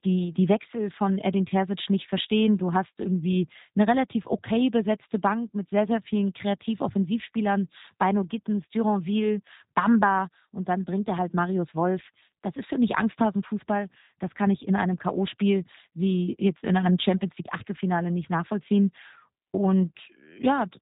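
Throughout, the speech has passed through a G.729 codec, which fits an 8 kbit/s G.729A stream. It leaves nothing above 3.8 kHz and a plainly rough, synthetic texture.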